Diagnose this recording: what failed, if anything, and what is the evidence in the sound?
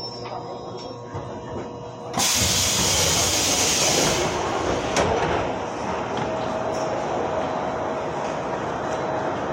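The playback stage opened on the adaptive stream at a low bitrate and switched up once the connection had been measured. From 0 to 2.0 s nothing above 8.4 kHz is present and codec artefacts are heavier, consistent with roughly 40 kbit/s MP3, before quality jumps without a gap to something like 128 kbit/s.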